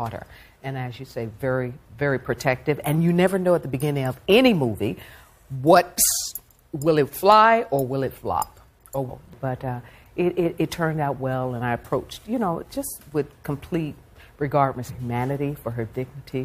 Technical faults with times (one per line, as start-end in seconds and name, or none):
9.08 damaged data in a compressed stream
14.89 damaged data in a compressed stream